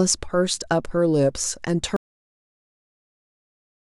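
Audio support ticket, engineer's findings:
Audio dropout to silence at 1.96 s, lasting to end of clip (about 2 s). Speech cuts off mid-flow into silence, no room tone. Likely input loss (disconnected device, failed link or mute) while recorder kept writing silence. Content after cut unrecoverable.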